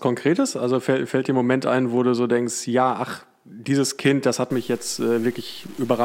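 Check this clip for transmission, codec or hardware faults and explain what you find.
One fault is present. From 4.51 s, just after "das hat", to the end at 6.05 s: low bit depth without dither, likely 7-bit truncation. The grainy distortion sits roughly 25 dB below the speech and rises and falls with it, unlike steady hiss.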